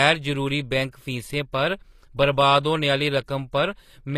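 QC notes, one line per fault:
Throughout, HE-AAC compression: the treble stays bright but sounds gritty and metallic, s sounds lispy, nothing above 14.9 kHz. This is likely spectral band replication copying lower bands upward, which fits about 24 kbps. Unlike plain low-pass dulling, the highs remain but sound synthetic.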